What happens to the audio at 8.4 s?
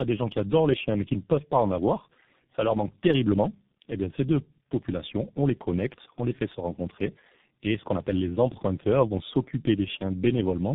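At 8.4 s, as throughout the clip, tandem speech coding is present. The speech sounds like it was decoded and re-encoded by two low-rate speech coders in a row, ending with one that fits G.723.1. It is rougher, more muffled and more warbly than a single codec would make it, and nothing is heard above 3.8 kHz.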